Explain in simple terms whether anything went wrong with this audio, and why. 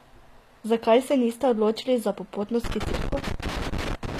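The whole speech clip sounds plainly damaged by compression, likely HE-AAC compression. Nothing is left above 14.9 kHz, and the rebuilt treble makes s sounds gritty and metallic.

Right after "niste odločili za popotno", at 2.64 s, a loose connector crackle starts. A bad contact keeps breaking the signal, causing scratchy bursts until the end at 4.19 s.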